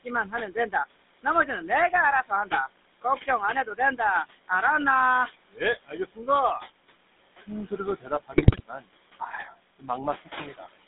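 Noise suppressor artifacts run through the whole of this speech recording. The room noise, which sits about 13 dB below the voice, is pulled down by about 18 dB in the gaps and swells back under each phrase. GSM full-rate codec coloring is also present throughout and plainly audible. The sound is confined to roughly 200 Hz to 3.7 kHz, and the pulse-driven vocal-tract model gives the voice a buzzy, gravelly edge, which fits a 13 kbps GSM full-rate link. Speech cut by the noise suppressor occurs at 0.03–0.74 s, 1.23–2.52 s, 3.02–3.99 s, 5.51–6.28 s, 7.39–8.87 s and 9.20–9.89 s. In each span the suppressor mistakes part of the speech for noise and dips it by about 15 to 20 dB, so each affected stretch, a fraction of a second in total, sounds swallowed. GSM bit errors strike at 8.32–8.61 s. Corrupted filter, pitch and gain values reach the decoder for a run of frames, and the voice breaks into squawks, pops and gargling there.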